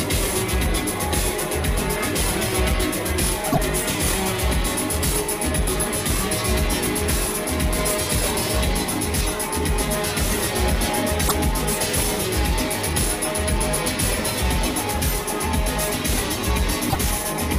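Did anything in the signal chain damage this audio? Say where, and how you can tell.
Yes, at the codec stage: three bursts of damaged data in a compressed stream, at 3.49–3.58 s, 11.25–11.32 s and 16.86–16.96 s, each about 70 to 100 ms long. Each is a brief disruption where the decoder was handed corrupted frames, misread them and had to hunt for the next valid frame header before resynchronising. A buffer underrun or network dropout would leave silence or a repeated block. These come from misread frames instead.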